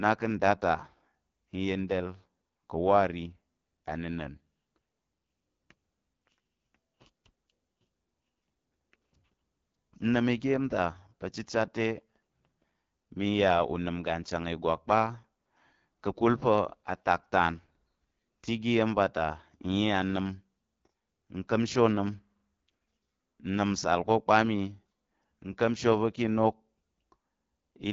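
The speech runs through the AMR wideband (HD Voice) codec for its whole length, at 8.85 kbit/s, one of the codec's lowest modes, and the damage is plainly audible. Below 6.4 kHz the codec rebuilds the signal from a vocal tract model driven by sparse pulses. At this rate there are too few pulses, so the voice comes out rough and raspy. The band from 6.4 to 7 kHz is only shaped noise standing in for real detail.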